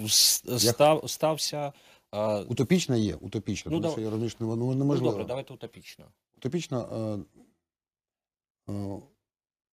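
From 0.68 to 0.89 s the loudest speech peaks take on a harsh, crackling edge, most likely microphone overload. The input probably ran about 3 dB past the converter's limit, flattening the tops of a small fraction of samples. Unlike a later level change, this adds distortion rather than altering loudness.

At 1.02 s the speech and background drop together by about 4 dB in one clean step, then again by about 2 dB at 3.18 s. This is likely the microphone volume being stepped down by the call software after the clipped peak. A compressor would pump and recover, but these drops hold, with no added distortion.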